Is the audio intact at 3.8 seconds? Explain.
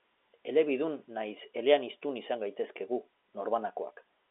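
Yes, the audio is intact at 3.8 seconds, with the G.711 telephone coding passing the speech within its usual narrow band that stops short of about 3.8 kHz.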